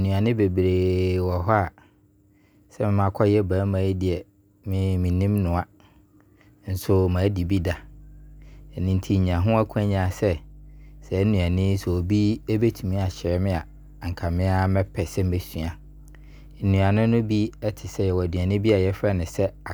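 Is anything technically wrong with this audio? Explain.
Yes, there is mains hum. From 7.36 s to the end at 19.73 s, the 50 Hz power line is leaking into the signal, likely through a ground loop or a nearby transformer. The result is a steady low drone, around 25 dB below the speech, sitting constantly under it.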